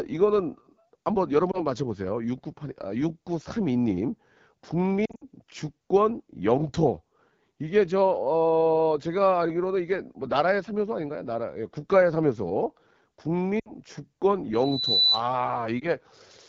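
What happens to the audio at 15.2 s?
A loudspeaker feedback squeal is ending. It runs from 14.53 to 15.24 s. The microphone is picking up its own loudspeaker, and the loop gain tops one at 4 kHz. That single tone swells over about half a second to roughly 5 dB above the speech, then stops.

The speech under it also carries AMR wideband (HD Voice) codec damage, which is present throughout. It sounds rough and raspy, which points to one of the codec's lowest rates, near 8.85 kbit/s.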